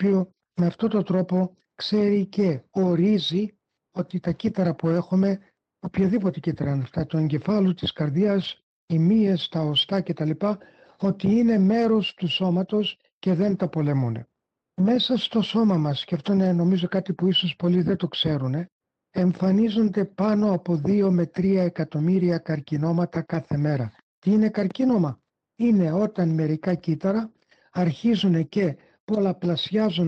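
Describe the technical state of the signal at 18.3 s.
At 18.3 s the signal is intact, with nothing beyond the ordinary coding of the Opus call path, whose band-limiting near 12 kHz is normal for that link.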